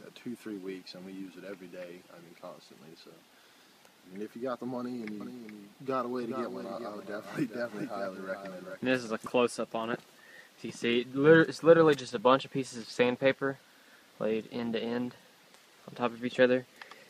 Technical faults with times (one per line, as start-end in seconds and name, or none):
5.20-9.26 doubled audio track